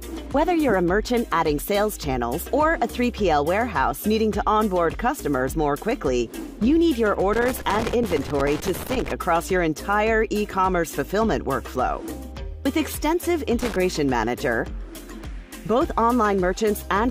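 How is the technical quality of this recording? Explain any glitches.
There's loose connector crackle in two bursts: from 7.33 to 9.12 s, then a short one at 13.60 to 13.76 s. A worn or dirty contact keeps making and breaking, chopping the signal and popping from any DC on the line, so you get ragged scratchy crackle.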